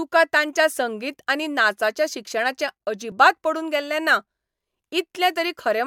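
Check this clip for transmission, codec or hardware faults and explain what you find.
The speech has two short discontinuities, at 2.31 s and 3.12 s. Each is a point where the sound jumps ahead, which is likely a dropped buffer (overrun). The program missed its samples before the hardware overwrote them, so a millisecond or two at 2.31 s and a few milliseconds at 3.12 s are gone. The two sides are joined without silence. The waveform shows a sudden step, and the spectrogram a thin vertical broadband line.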